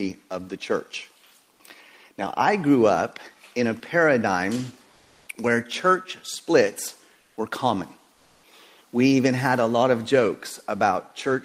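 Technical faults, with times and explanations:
4.91–5.27 s, 7.19–7.37 s and 8.13–8.43 s: comfort noise in place of the background. In these gaps of 360, 180 and 300 ms, the quiet background (about 41 to 46 dB below the loudest sound) becomes a smooth, detail-free hiss. The level holds in the first gap but shifts by about 1 dB and about 5 dB in the later two. The likely cause is Opus DTX: the sender paused transmission and the receiver synthesised noise. Unlike a gate or dropout, the sound never falls to silence.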